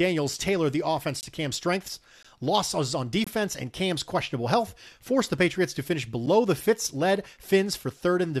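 Speech gets punched with short, hard-edged silences at 1.21 to 1.23 s, 2.23 s, 3.24 to 3.27 s and 6.26 s. That's a gap between stream segments: one-second chunks whose timestamps don't quite meet, so the player pads 8 to 23 ms of silence.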